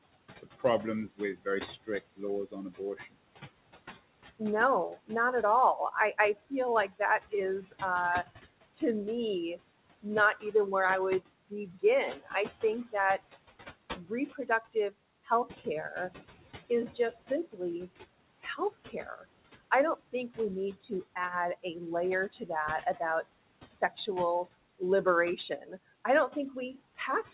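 Throughout the clip, noise suppressor artifacts are present. The suppressor pulls the room noise down by about 19 dB in the gaps, so the background sinks between phrases and swells back underneath them.

Speech cut by the noise suppressor occurs in four stretches where the suppressor misreads quieter speech as noise. From 0.43 to 3.15 s it cuts around half a second of speech by up to about 21 dB. From 4.39 to 7.74 s somewhat less than half a second drops by up to about 16 dB. From 8.74 to 15.66 s roughly a second is affected by up to about 20 dB. From 16.88 s to the end the dips reach about 14 dB. Soft consonants and word tails sound swallowed. The room noise, about 16 dB below the speech, is what the suppressor is chasing, and the band-limited call path, with nothing above 4 kHz, adds to the muffled feel.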